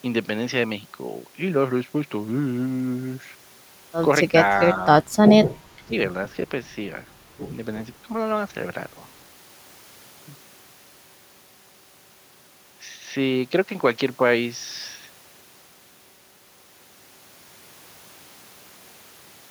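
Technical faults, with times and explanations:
5.88 to 5.92 s, speech suppressed in double talk: the voice briefly sags by roughly 10 dB for around 40 ms, a quick dip in level before it recovers. The likely cause is an echo canceller handling speech from both ends at once. Unable to separate the local talker from the loudspeaker echo, it turned down the whole signal and attenuated the wanted voice along with the echo for that moment.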